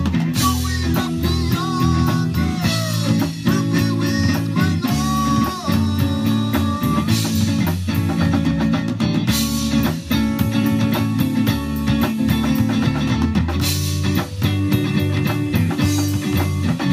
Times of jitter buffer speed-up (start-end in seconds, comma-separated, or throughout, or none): none